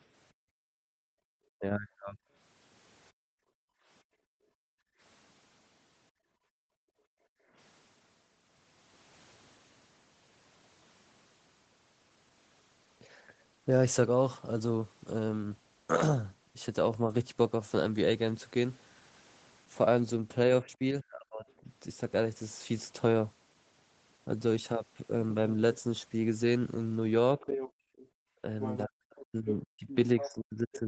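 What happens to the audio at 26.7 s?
Nothing goes wrong at 26.7 s: the speech carries on intact through that moment, with only the ordinary band limit of the call path, which tops out around 8 kHz.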